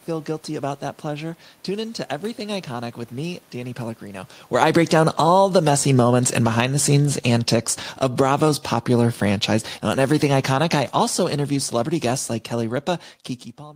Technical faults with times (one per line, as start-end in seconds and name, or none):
4.44-5.36 automatic gain falling
5.29-7.02 automatic gain rising
6.31-12.85 automatic gain falling